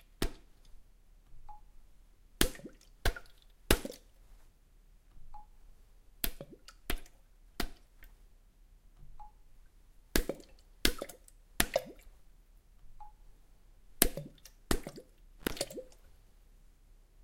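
At 15.39 to 15.51 s, an intermittent contact briefly opens the signal path for about 76 ms. The audio drops out with crackle at each edge and faint hiss underneath.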